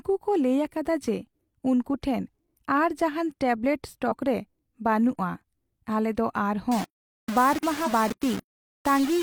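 At 4.08 to 4.13 s a brief glitch cuts into the speech. This is damaged data in a compressed stream: corrupted bytes make the decoder misread those frames, lose sync and resume at the next frame header.

From 6.72 s to the end the speech turns coarse and grainy. The roughness follows the sound. The likely cause is low bit depth without dither, with rounding that suggests about 4 bits, leaving error roughly 15 dB below the signal.

At 7.83 to 7.88 s, inside that grainy stretch, a second brief glitch occurs as the same kind of stream damage forces the decoder to resynchronise.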